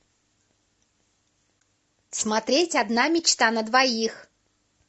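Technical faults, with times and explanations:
throughout: low-delay AAC compression. The speech carries plainly audible coding damage, with a rough, grainy texture, likely from AAC-ELD at a rate that fits around 32 kbps. Its short frames resolve pitch harmonics poorly, leaving noise between them and a degraded top band.
1.61 s: AAC frame loss with muting. A brief soft-edged dropout of about 20 ms, consistent with one lost frame whose spectrum the decoder zeroed. The overlapping transform windows fade the sound down and back up across the gap rather than cutting it abruptly.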